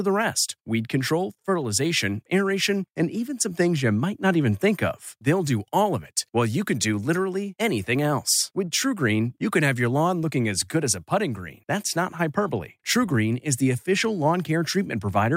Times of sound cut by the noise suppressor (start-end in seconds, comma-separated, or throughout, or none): none